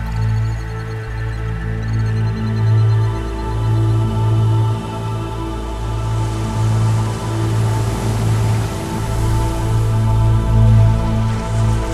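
No technical faults are audible.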